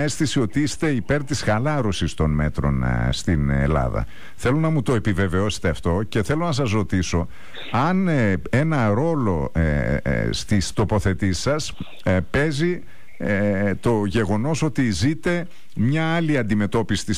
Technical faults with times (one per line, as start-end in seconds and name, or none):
none